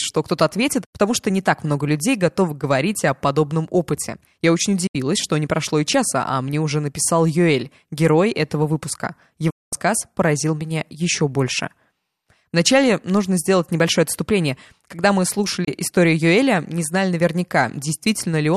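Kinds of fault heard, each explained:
Digital broadcast dropout: the receiver mutes when frames fail, so the speech drops to silence through an 8 ms fade at 4.87, 9.50 and 15.64 s, losing 72, 216 and 24 ms, which fits 24 ms frames. Unlike analogue fading, there is no hiss or gradual weakening.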